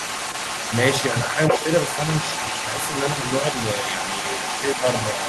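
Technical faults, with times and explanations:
Throughout, echo leak: a delayed copy of the speech trails the original by about 328 ms, sitting only a few decibels below it, roughly 5 dB down. This is likely a far-end loudspeaker being picked up by that side's microphone, with its echo canceller failing to strip the returning sound before sending it back down the line.
1.52 to 1.65 s, speech suppressed in double talk: the speech briefly sags, dipping by around 5 dB over roughly 150 ms. While both directions carry sound at once, the echo canceller cannot tell the local talker from the loudspeaker echo and likely ducks everything together, pulling the wanted speech down along with the echo it is trying to remove.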